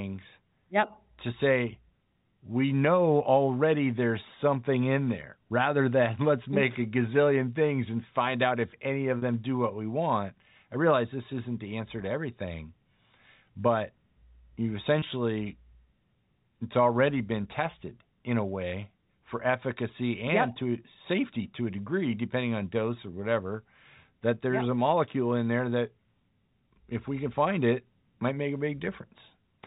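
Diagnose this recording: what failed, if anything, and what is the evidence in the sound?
What failed is the network: two short packet losses, patched over by packet loss with pitch repetition. At 9.18 s the speech briefly sticks on a buzzy, held tone for about 40 ms until 9.22 s, which fits two 20 ms packets going missing. At 15.0 s there's a shorter 20 ms catch, likely a single packet. In both gaps the receiver loops the last pitch cycle it got, which is why you hear a sustained buzz rather than a dropout. The G.711 telephone coding underneath keeps its usual narrowband sound.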